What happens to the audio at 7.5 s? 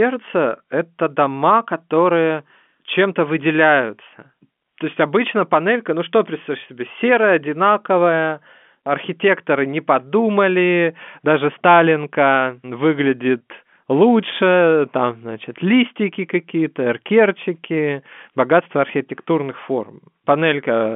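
Nothing goes wrong at 7.5 s: the speech carries on intact through that moment, with the G.711 telephone coding behaving as a normal phone line would.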